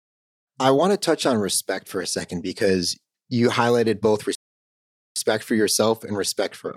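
At 4.35 s, right after "because you highlighted both", the speech just cuts out and there's dead silence until 5.16 s, when it picks up again with "for yourself and respect". That's a playback stall lasting about 0.81 s. It sounds like the player most likely ran dry on data or had its thread held up, so the output had nothing to play until it caught up and carried on.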